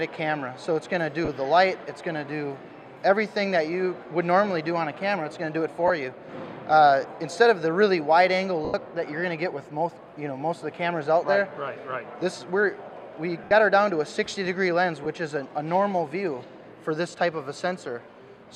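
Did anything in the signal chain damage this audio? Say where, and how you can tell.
Yes. The damage is on the Bluetooth link: lost LE Audio frames at 1.25 s (30 ms), 5.88 s (20 ms), 8.65 s (90 ms), 13.44 s (70 ms) and 15.04 s (20 ms). The LC3 decoder fills each gap by repeating the last spectrum with random signs and fading it, so the sound becomes a brief noisy smear. A spectrogram shows blurred texture following the preceding spectrum, and the waveform shows a decaying envelope. Lengths in 10 ms steps fit whole dropped frames.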